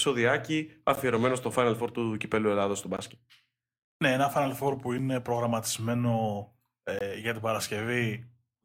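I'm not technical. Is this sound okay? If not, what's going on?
No. The speech has a gap between stream segments: brief hard-edged silences at 0.95 s, 2.97 s, 4.98 s and 6.99 to 7.01 s (just before "για την"), every 2 seconds. Stream pieces don't quite meet, leaving tiny holes of silence. Nothing is lost.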